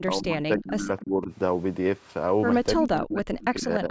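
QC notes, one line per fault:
0.01–1.31 s, 2.76–3.25 s and 3.5–3.9 s: speech suppressed in double talk. The level dips in pieces, by about 25, 30 and 15 dB at its deepest, for roughly a second in the first stretch and about 0.4 s in each later one. This is likely an echo canceller ducking the near talker while the far side spoke. On the waveform the envelope shows sudden notches, and the spectrogram shows the bands thinning in gated blocks.
0.98–1.04 s and 3.4–3.46 s: echo leak. Brief scraps of a delayed copy of the speech come back about 295 ms late, at about 20 dB below the speech. This is likely the residue of a loudspeaker echo that the canceller did not fully remove. On the spectrogram it appears as a faint, time-shifted repeat of earlier harmonic patterns, below a band limit near 8 kHz.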